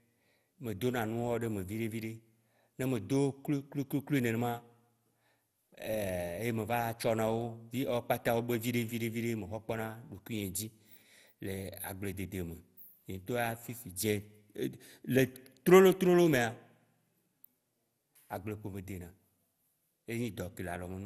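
Generation loss throughout: swirly, hollow, smeared speech with blurred attacks and nothing above 16.6 kHz, likely from about seven MP2 re-encodes, each re-quantising afresh.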